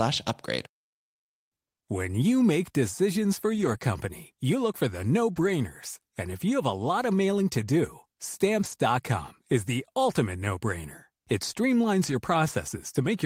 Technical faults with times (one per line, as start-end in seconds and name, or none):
3.53-3.83 lost packet rebuilt from error correction
3.77-3.81 short concealed packet loss
5.35-5.49 lost packet rebuilt from error correction
8.59-8.73 lost packet rebuilt from error correction
12.07-12.13 lost packet rebuilt from error correction